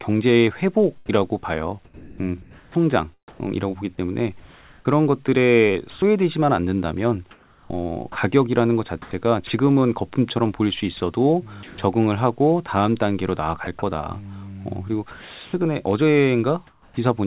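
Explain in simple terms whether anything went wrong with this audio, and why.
Several parts of the speech go missing, and the cause is likely the caller's voice detector, which decides when to send sound and when to stay quiet.

From 1.19 s to 9.5 s, and again from 13.64 s to 16.97 s, the speech is chopped by the voice detector. The sound keeps cutting in and out. Quiet parts are swapped for a soft hiss, about 1.9 seconds in total in the first stretch and about 0.8 seconds in the second.

At 10.97 s to 11.00 s, a brief piece of sound is dropped by the voice detector. The system treated it as background and stopped sending. A short burst of steady hiss or near silence plays where the speech should be.

From 10.97 s to 11.78 s, comfort noise replaces the background. When no speech is sent, the listener's side fills the gap with made-up hiss. For parts of this stretch, adding up to about 0.18 seconds, the real room sound turns flat and featureless.

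The call line carries nothing above 4 kHz, so the voice has the narrow sound of a telephone.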